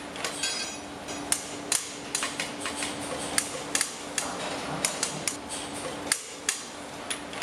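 From 1.08 to 5.36 s a doubled audio track appears: an equally loud, dry copy trails by roughly 400 ms, likely from a second, slower capture path.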